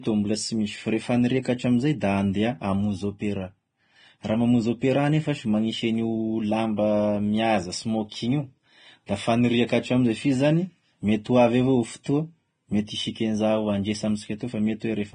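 Speech, with heavy coding damage throughout. Nothing sounds above 9.7 kHz, and the treble is hissy and grainy. The likely cause is Vorbis compression, at a bitrate fitting about 23 kbps.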